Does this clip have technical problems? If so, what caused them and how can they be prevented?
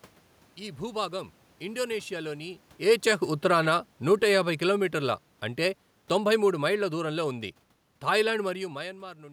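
Yes, there's one: automatic gain falling. From 2.75 s to 7.4 s the level sinks by about 8 dB, and the room noise sinks right along with the speech. That shared drop is the giveaway, since a talker moving, as happens around 2.5 s and again near 8.5 s, changes the voice but leaves the room sound alone. The AGC judged the input too hot or its background noise too strong and eased its gain down bit by bit. To prevent it, set a fixed input gain with enough headroom and switch the AGC off.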